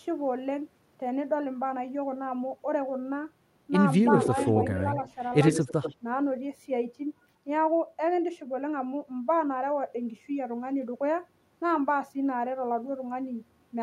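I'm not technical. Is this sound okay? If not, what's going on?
No. An echo leak appears from 4.04 to 4.72 s, briefly and faintly at 5.03 to 5.1 s, and again from 5.45 to 5.96 s. A copy of the speech comes back 85 ms late, most likely from a loudspeaker feeding a microphone that the echo canceller didn't fully clean.

Speech suppressed in double talk occurs at 5.68 to 5.73 s. The speech dips for a moment, likely because the echo canceller turned both the voice and the echo down while both sides overlapped.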